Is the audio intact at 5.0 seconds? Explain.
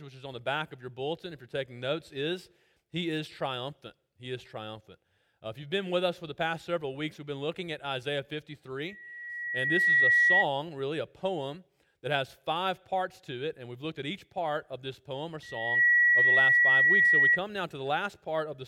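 Yes, the audio is intact at 5.0 seconds, with no dropout, glitch or other fault audible at that moment.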